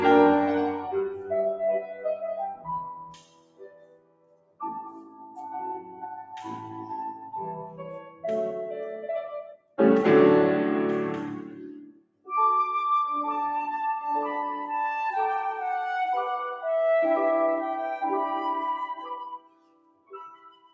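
A noise suppressor applied to music or sounds runs through the whole clip. It was built for speech. It treats steady tones, ambience and tails as noise. Level swings by around 20 dB, so the sound pumps and thins.

Sound is cut by the noise suppressor at 0.72–1.32 s (about 9 dB), 1.8–4.61 s (about 20 dB), 4.94–5.38 s (about 7 dB), 5.82–6.32 s (about 6 dB), and 7.64–8.24 s (about 11 dB). It happens again at 9.49–9.79 s, 11.86–12.3 s and 19.32 s to the end, each about 20 dB. Held parts sink and decays stop early.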